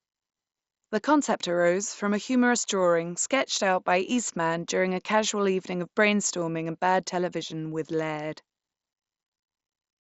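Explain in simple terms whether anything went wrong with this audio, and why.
Nothing went wrong with this speech recording. It comes through a Bluetooth headset link using the mSBC codec, which keeps the sound up to about 8 kHz and leaves only a faint graininess on the louder moments.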